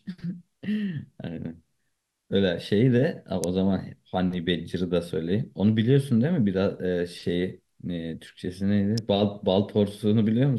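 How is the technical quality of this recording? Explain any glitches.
Two sharp snaps land on top of the speech, at 3.44 s and 8.98 s. They're electrical switching spikes: brief arcs, likely from a switch, motor or static discharge nearby, that the audio line picked up. Each is over almost instantly, a tight crack sitting above the voice rather than part of it. The first is the louder, peaking somewhere around -10 dBFS; the second is a bit softer, around -15 dBFS.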